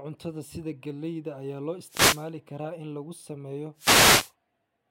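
A speech recording with two wireless microphone noise hits, at 1.84 to 2.31 s and 3.75 to 4.33 s, bracketing "karaa in lagu sameeyo". In each, the analogue FM link fades as reflections cancel, and receiver static swishes up over the speech.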